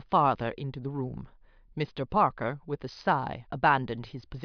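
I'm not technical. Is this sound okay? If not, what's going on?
Yes, this one sounds okay. Nothing in the recording jumps out as a problem, so the speech comes across as it should.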